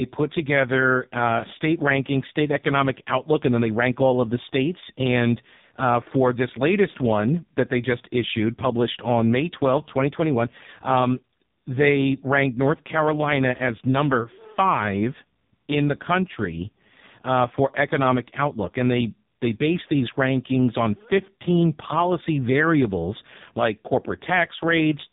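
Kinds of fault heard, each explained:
AMR narrowband mobile codec: nothing passes above 3.8 kHz, and the speech sounds heavily buzzy and synthetic, fitting a very low rate near 5 kbps, unlike simple muffling from low-pass filtering.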